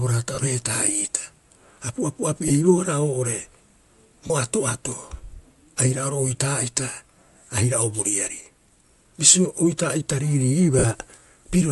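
Speech, carrying a grainy, breathy edge across its whole length, with the upper band sounding noise-filled rather than detailed; the likely cause is Bluetooth LC3 compression, where the encoder discards much of the top spectrum and substitutes noise, a texture that fits a moderate rate around 48 kbps with 10 ms frames. Lost LE Audio frames produce brief noisy smears at 0.35–0.38 s, 2.48–2.51 s, 4.27–4.30 s and 10.79–10.85 s, lasting 30, 20, 30 and 50 ms. At each gap the decoder repeats the previous spectrum with scrambled phase instead of real signal.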